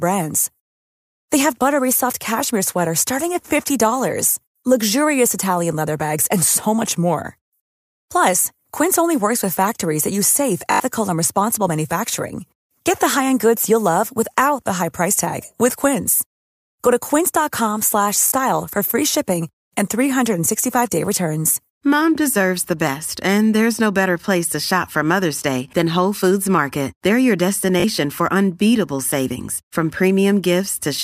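Audio failed to reach the playback device in time, so it replayed its last buffer in place of the missing sound. This repeated buffer happens three times. From 10.72 to 10.8 s, between "factories that use safe" and "and responsible manufacturing", a tiny slice repeats several times at a 20 ms spacing, which fits a 20 ms buffer. It produces a brief buzz with hard joins, and a few tens of milliseconds of speech are lost. Shorter versions of the same stutter occur from 18.28 to 18.32 s, before "for free shipping", and from 27.8 to 27.84 s, before "for unbeatable savings from".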